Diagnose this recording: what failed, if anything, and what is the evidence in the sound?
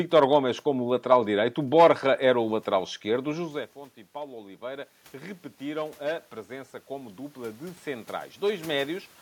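Automatic gain rising, 3.09 to 9.04 s (call processing): after input drops about 18 dB, the AGC slowly lifts voice and room noise together by about 11 dB.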